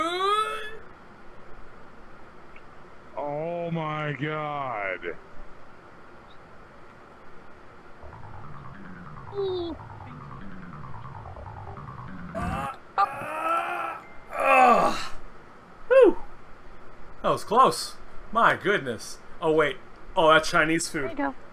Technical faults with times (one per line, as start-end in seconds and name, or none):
none